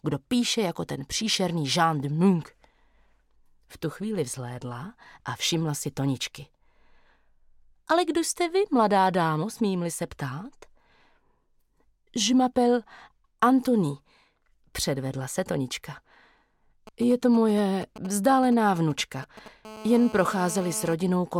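From 16.87 to 19.48 s, GSM signalling bursts break in: a nearby 2G phone exchanging control traffic emits short groups of radio bursts, which the audio circuitry rectifies into a galloping dit-dit-dit of brief 217 Hz buzzes, sitting roughly 15 dB below the wanted sound.

At 19.65 s this turns into continuous GSM phone buzz, lasting until 20.94 s. The phone is now in a call, transmitting steadily at 217 bursts per second, and the rectified pulses produce a hard, raspy 217 Hz buzz rich in harmonics, about 16 dB below the signal.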